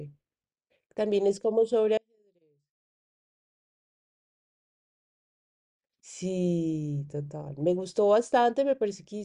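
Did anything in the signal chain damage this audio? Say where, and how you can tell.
Yes. From 1.97 s to 5.73 s the speech drops by about 38 dB to a faint residue. The waveform shrinks to a sliver and the spectrogram nearly empties, bass included. The likely cause is one channel inverted in analogue wiring, so the shared centre content cancels when summed to mono.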